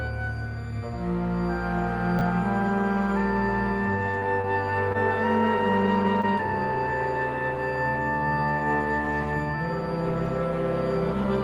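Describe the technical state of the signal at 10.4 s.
Nothing at 10.4 s indicates a technical fault: the signal is intact at that moment.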